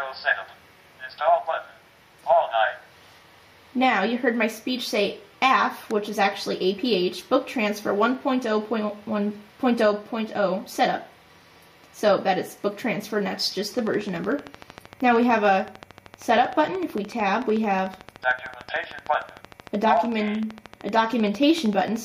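A train of clicks runs from 13.79 s to 21.97 s: roughly a hundred near-identical pulses at a steady 13.2 per second, peaking a little above the sound itself, around 5 dB. The likely cause is interference from nearby equipment or a faulty connection or power supply. It differs from random crackle because the clicks share one shape and keep an even spacing, and they are too slow to merge into a buzz, so they are heard as distinct ticks.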